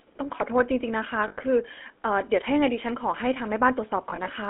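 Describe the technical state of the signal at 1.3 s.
Lost GSM frames from 1.28 to 1.36 s: an 80 ms gap, which fits four dropped 20 ms frames, is concealed by repeating the last good frame's settings. The result is a rough, metallic ring held over the gap instead of fresh speech.

Underneath, the GSM full-rate codec is audible throughout. The vocal tract is modelled and driven by sparse, regularly spaced pulses, giving a buzzy, gravelly roughness. The band is confined to about 250 Hz to 3.4 kHz, which points to a 13 kbps GSM line.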